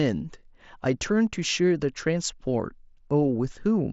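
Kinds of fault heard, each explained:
No faults heard in this speech; it runs through a wideband Bluetooth headset link, likely mSBC, with nothing above about 7.7 kHz.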